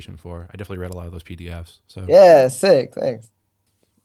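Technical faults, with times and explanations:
No technical faults can be heard in this speech clip.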